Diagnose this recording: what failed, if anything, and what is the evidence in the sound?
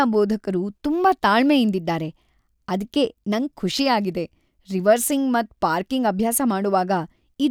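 Nothing in the recording points to a failure at any stage, from capture and conversion through to storage and playback, and the speech signal holds together without any audible disturbance.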